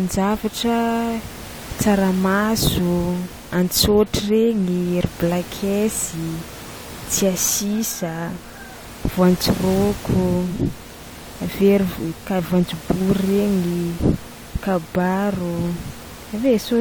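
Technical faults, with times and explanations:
No technical faults can be heard in the recording. Room noise sits underneath the speech at about 17 dB below it, part of the acoustic space where the microphone was rather than anything added by the system.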